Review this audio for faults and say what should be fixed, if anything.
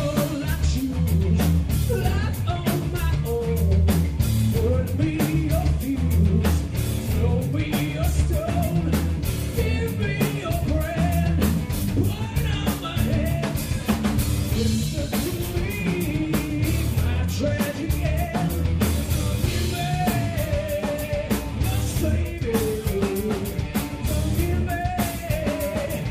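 Nothing here needs fixing; I listened all the way through and didn't catch any faults in the audio, so it can stay as it is.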